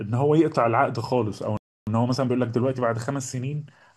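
At 1.57 s the speech stops dead and stays silent for about 0.3 s, until 1.87 s. This is a playback stall, most likely the player running short of data or its output thread being held up. What separates it from a dropout is that nothing is lost. A dropout removes a slice of sound and the flow jumps ahead, but here the silence is inserted and the speech resumes exactly where it broke off.

Right after the stall, from 1.87 s to 3.83 s, the speech runs hurried at roughly 1.15 times normal speed while its pitch stays put. This is time-compressed catch-up: the player works off the backlog left by the stall by dropping tiny pieces and cross-fading across the joins. A simple playback-rate error would raise the pitch along with the speed, and this does not.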